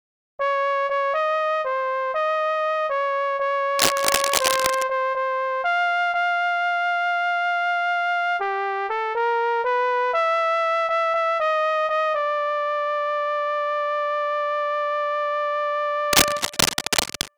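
Two bursts of scratchy, crackling noise sit over the audio, from 3.78 to 4.83 s and from 16.13 to 17.28 s, each roughly as loud as the sound itself. The likely cause is cable scratch noise from a worn lead or connector being moved. A spectrogram shows dense, ragged broadband smears, and the waveform shows irregular jagged spikes.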